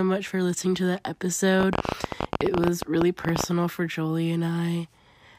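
From 1.61 to 3.45 s, a train of clicks runs over the speech. About thirty sharp pulses arrive at roughly 15.8 per second, unevenly spaced. They peak about 15 dB above the voice. The likely cause is electrical interference or a faulty connection or power supply.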